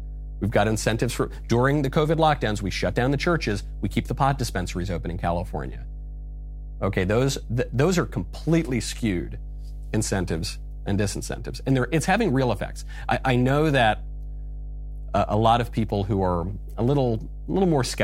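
From start to finish, mains hum sits under the speech: a steady 50 Hz drone with low harmonics, only about 10 dB below the talker, pointing to a ground loop or nearby transformer. A spectrogram shows unbroken horizontal lines at 50 Hz and multiples.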